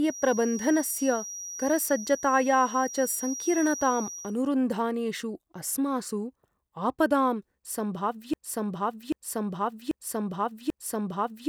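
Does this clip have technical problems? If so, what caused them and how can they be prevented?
Yes. From 0.0 to 4.37 s a thin feedback whistle near 5.8 kHz sits about 15 dB below the speech, swelling and fading slowly in level. Unlike a steady electrical tone, it breathes with the room, likely from a loudspeaker feeding the microphone at the edge of ringing. Lowering monitor gain, moving the microphone away from loudspeakers, or notching that frequency prevents it.

From 8.34 s to the end, a broken-record loop replays the same 0.79 s fragment four times back to back. Unlike an echo, each repeat is identical and doesn't fade, and the audio that should follow is lost. This likely comes from a stalled player, encoder or stream resending its last buffer. Adequate buffering and stall detection that mutes instead of repeating prevents it.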